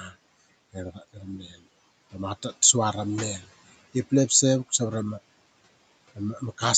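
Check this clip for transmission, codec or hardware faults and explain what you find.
One fault stands out, from the noise suppressor rather than from the codec or the hardware, in a call path whose band stops at 8 kHz and whose room noise sits about 21 dB under the speech.

Between 0.94 and 1.23 s there is speech cut by the noise suppressor, about a tenth of a second in all, dropping by up to about 14 dB. The suppressor judged quiet speech energy to be background and attenuated it, so soft sounds come out swallowed and faint. A packet-loss dropout would cut to silence or a smeared repeat. Here the sound fades down with the room noise and no click.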